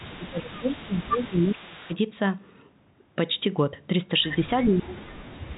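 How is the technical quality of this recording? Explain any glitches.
The recording has two recurring problems: a faint delayed repeat of the speech and stretches where the speech level collapses, all heard through a telephone-band channel that cuts off at 4 kHz.

Echo leak, 0.0 to 0.7 s and 0.91 to 1.96 s: a copy of the speech returns about 0.47 s late and about 25 dB down. This is likely a loudspeaker-to-microphone path that an echo canceller at the far end failed to remove fully, so the residue was transmitted back.

Speech suppressed in double talk, 0.06 to 1.92 s and 4.68 s to the end: the speech dips and breaks up, falling by around 20 dB in the first stretch and around 40 dB in the second. The likely cause is an echo canceller that mistook simultaneous talk for echo and attenuated everything.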